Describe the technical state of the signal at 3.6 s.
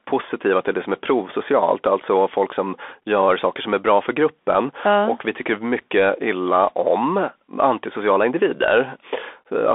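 At 3.6 s the speech passes through the Bluetooth CVSD headset codec, present across the whole clip. Its one-bit up-or-down coding runs on a 64 kbps link, and the band is confined to 250 Hz–3.5 kHz. Unlike clean telephone band-limiting, it adds plainly audible granular hiss and scratchy s sounds.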